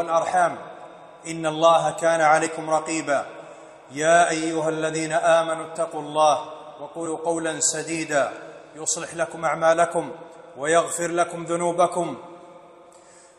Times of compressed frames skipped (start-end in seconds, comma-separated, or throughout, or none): 2.43-2.47, 5.72-5.77